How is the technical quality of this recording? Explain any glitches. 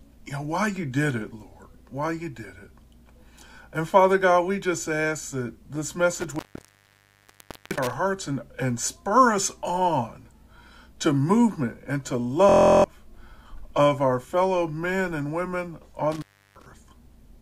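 The recording has two kinds of fault: two dropouts from an intermittent contact and one brief system hang loop.

Between 6.15 and 7.93 s, and again between 16.12 and 16.66 s, an intermittent contact breaks the signal path. A loose plug or cable lifts off its contact, and the sound vanishes for about 1.32 s the first time and 0.34 s the second, with crackle at each edge as the connection scrapes open and shut. Unlike a digital dropout, the gap holds faint hiss rather than clean silence.

From 12.49 to 12.84 s a system hang loop takes over. The computer or driver stalled while the audio hardware kept replaying the same stretch of its ring buffer. A 23.22 ms slice repeats about 15 times, which fits a 1024-sample buffer. At 43.1 Hz the repeats fuse into a steady buzz instead of a stutter, and about 0.4 s of sound is lost. It is identical looping with no crackle or hiss, which sets it apart from the contact fault.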